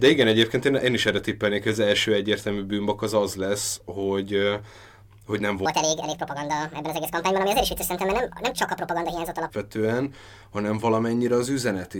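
Likely a playback or editing stage running this stretch against the wrong clock, from 5.66 to 9.50 s: a section at the wrong speed. The speech plays 1.71 times faster, pitch jumps close to ten semitones, and voices sound high and hurried, then snap back.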